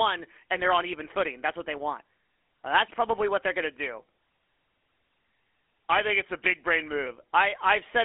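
GSM full-rate codec coding runs through the whole speech clip. The codec rebuilds the voice from a vocal-tract filter fed by a coarse, regularly spaced pulse excitation, discarding much of the fine detail, and the result sounds plainly buzzy and gravelly, consistent with a 13 kbps GSM stream. The sound sits in a telephone band of roughly 300 Hz to 3.4 kHz, and nothing survives above 3.8 kHz, so sibilants and breath lose their edge.

A drift correction step is the likely cause of what happens from 5.90 to 7.06 s. Playback slows by about 6.1% for just over a second, and pitch drops by 109 cents, slightly more than a semitone, because speed and pitch move together when the rate changes. The speech sags noticeably flat and sluggish, then snaps back to normal speed and pitch at 7.06 s, as a clock-matching buffer would after refilling.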